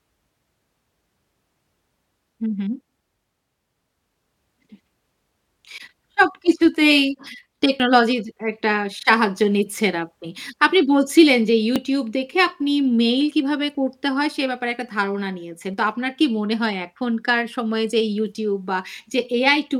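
At 7.80, 9.78, 11.76, 13.75 and 15.74 s the speech skips, spaced about 2 s apart. This is overlap between stream segments: neighbouring chunks claim overlapping time, so each boundary trims away real audio, roughly 6 to 17 ms each time, and the signal jumps ahead. On a waveform each point shows an abrupt step discontinuity; a spectrogram shows a thin vertical broadband line at each boundary.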